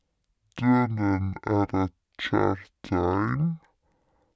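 Throughout, wrong sample rate: speech at half speed, an octave low, fitting 32 kHz audio played at 16 kHz; unlike pitch shifting, tempo falls too.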